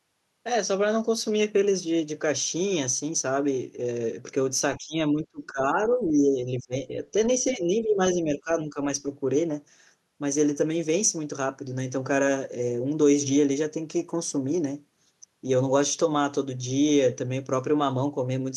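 The speech dips sharply and thins out in bursts at 4.78–4.96 s, 5.14–6.97 s, 7.44–8.01 s, 8.22–8.50 s and 8.67–8.77 s, falling by up to about 20 dB. This is likely speech suppressed in double talk, where the echo canceller cannot separate the near-end talker from the overlapping loudspeaker echo and attenuates both.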